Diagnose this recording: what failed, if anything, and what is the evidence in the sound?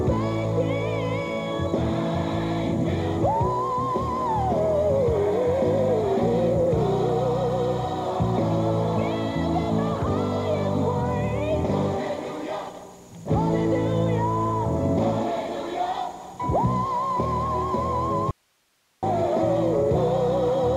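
Likely an upstream signal break with the following path still live: an audio dropout to a faint residue from 18.31 to 19.03 s cuts abruptly to hiss about 45 dB down.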